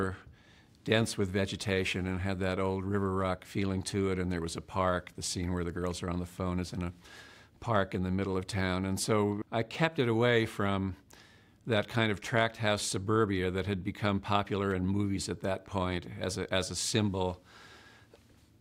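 No technical faults can be heard anywhere in the clip. There is no moment in it that calls for a timestamp or a second listen.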